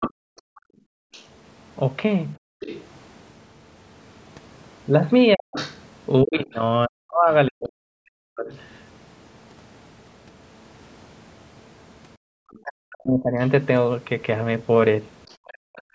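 A speech recording from a call, where the echo canceller on the talker's side repeatedly fails to keep the loudspeaker out of the microphone. The clearest problem is the other side's voice leaking through, likely because the canceller left part of the far end's speaker output in the microphone signal. From the start to 8.6 s a second voice sits roughly 15 dB under the talker, and it comes back from 12.54 to 15.36 s much more faintly, around 35 dB down, as a ghostly trace beneath the main voice. The canceller's suppression stage also clamps the microphone while the loudspeaker plays, so the background is gated by the echo canceller. Between 0.11 and 2.6 s the room sound drops by as much as about 40 dB for around a second in total, then returns. A second brief gap of the same depth follows at 12.17 to 12.3 s. Where both sides talk at once, the canceller likely treats the near talker as echo, and the result is speech suppressed in double talk. 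From 5.35 to 8.5 s the talker's voice ducks by up to roughly 40 dB, chopping away about two seconds of it. The same happens from 12.58 s to the end, costing around a second and a half. Throughout, the call's microphone processing limits the audio to nothing above 8 kHz.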